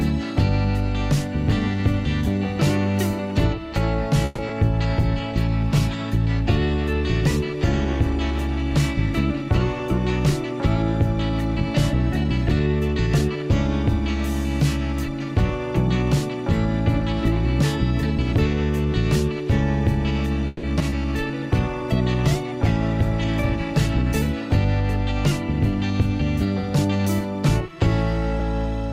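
At 4.25 s the audio stops advancing for about 130 ms. The last sound is drawn out and fades rather than dropping to silence, then playback resumes from where it stopped with nothing skipped. The 130 ms of delay it adds stays in the stream afterwards. This is a call audio freeze, likely caused by packets stalling in transit until the jitter buffer ran dry, with the receiver extending the final sound while it waited.

Just after, from 4.48 to 4.51 s, there is a short concealed packet loss. Roughly 20 ms of audio never reached the decoder in time and about 10 ms was patched by continuing the preceding sound before blending back into the real signal. It comes across as a brief smear or wobble, with a sliver of content gone.

From 4.81 to 12.10 s a call bitrate drop takes the encoder from 128 kbps down to 24 kbps, and it stays at the bottom for about 3.2 s. The bandwidth estimate collapsed and the encoder was forced to code far more coarsely. 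The sound turns rough and watery and loses its top end until the rate climbs back.

Overlapping the end of that, 11.55 to 13.29 s carries a jitter buffer speed-up. The buffer had built up more audio than its target, so the receiver trimmed short pitch-period-sized pieces repeatedly to shed the excess, removing around 150 ms in total. Playback runs at about 107% speed with pitch unchanged and sounds slightly hurried.

Between 20.47 and 20.94 s repeated packet loss produces robotic sound. Three gaps fall within half a second, the longest about 160 ms. Roughly 190 ms was filled by extrapolating the last sound and about 40 ms is simply missing, so some 40% of that stretch is synthetic. Each patch runs straight into the next hole, giving a choppy texture with pieces dropped.

A second call bitrate drop runs from 21.12 to 27.33 s, again falling from 128 to 24 kbps and bottoming out for about 2.7 s. 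It produces the same coarse, muffled, watery character as the first, and the sound recovers as the rate returns.

Finally, 26.45 to 28.40 s brings another jitter buffer speed-up, milder at about 104%, with around 70 ms trimmed away. The sound is quicker but its pitch is steady.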